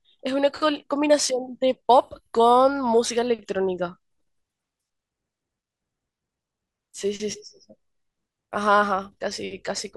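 Nothing in the speech stood out as a technical problem on listening.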